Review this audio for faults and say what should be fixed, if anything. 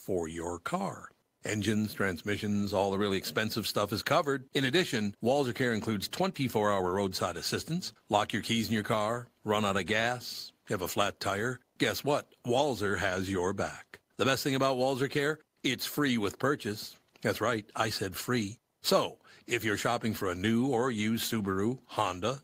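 Nothing here needs fixing, since no technical faults turn up anywhere in the recording.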